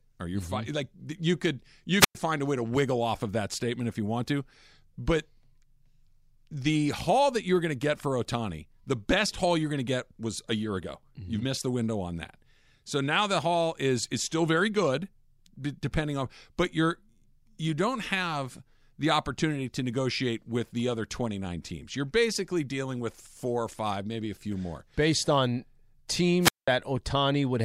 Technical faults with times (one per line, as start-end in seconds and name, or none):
1.99-2.15 wireless microphone squelch dropout
26.40-26.68 wireless microphone squelch dropout